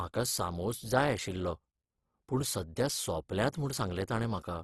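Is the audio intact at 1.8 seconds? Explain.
No. At 1.8 seconds the speech carries what is likely Opus compression, present throughout the clip rather than only at that moment. Nothing is heard above about 12.1 kHz, and the codec damage is plainly audible: the voice sounds grainy and rough rather than swirling. In its music-oriented CELT mode the encoder keeps each band's energy but, when bits run short, fills bands with folded copies of lower ones or with noise. The result points to a low bitrate around 16 kbps.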